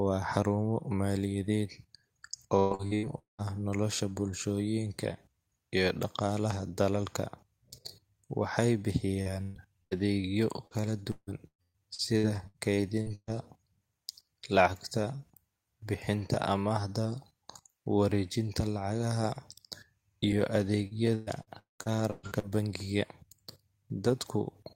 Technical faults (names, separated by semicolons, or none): repeated packet loss (robotic sound); short concealed packet loss; burst of packet loss